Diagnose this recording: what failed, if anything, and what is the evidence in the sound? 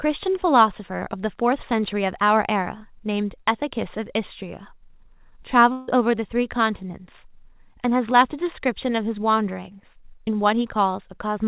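At the network stage, the likely cause is a long network dropout: packets stopped arriving from 5.72 s to 5.90 s, and that stretch of audio was lost. Instead of a gap of silence, the receiver stretches the last sound into a buzzy, fading continuation lasting about 0.16 s. The speech then resumes with the missing portion skipped. Throughout the clip, the G.711 mu-law call codec's band limit leaves nothing above 4 kHz.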